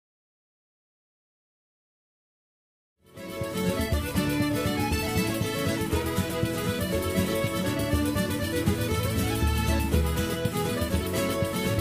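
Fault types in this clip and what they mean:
No technical faults can be heard in this clip. The level rises in a gentle fade from about 3 s, reaching full level by 3.82 s with no click or hard edge.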